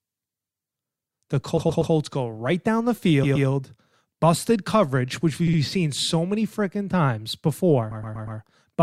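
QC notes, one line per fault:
1.57–1.93 s, 3.23–3.47 s, 5.47–5.59 s, 7.91–8.39 s: repeated frames. A 120 ms block, 60 ms at 5.47 s, is played again two to four times in a row. The decoder replays the same compressed frames, so the speech stutters and runs 120–480 ms longer.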